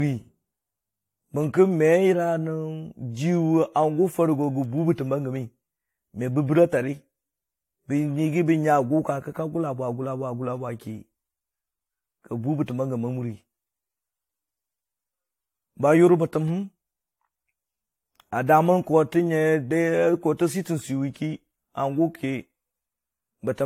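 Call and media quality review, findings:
Generation loss throughout speech. Swirly, hollow, smeared attacks, nothing above 16.6 kHz. Likely repeated AAC re-encoding, about four passes near 64 kbit/s, quantisation noise compounding.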